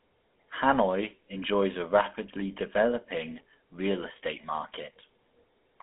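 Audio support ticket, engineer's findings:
Buzzy, gravelly speech throughout, nothing above 3.8 kHz, 250 Hz–3.4 kHz line band. GSM full-rate codec: pulse-driven vocal-tract model, sparse excitation, fits 13 kbps encoding.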